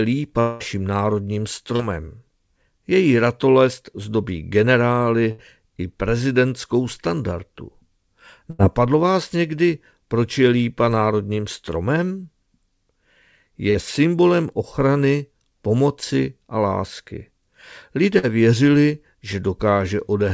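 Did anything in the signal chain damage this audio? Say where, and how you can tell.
Yes. A network dropout likely caused this: from 0.40 to 0.63 s the sound continues as a fading synthetic buzz or hiss for about 200 ms, then resumes with that stretch missing.

Short concealed packet loss at 1.76 and 13.71 s: the receiver filled roughly 40 ms holes by extending the previous sound, heard as brief smears or wobbles.

Burst of packet loss at 5.31 to 5.41 s, 8.50 to 8.62 s and 18.19 to 18.26 s: consecutive packets vanished, so the last sound is held and faded, then the audio resumes with the stretch in between missing. The G.722 call path carries nothing above 8 kHz.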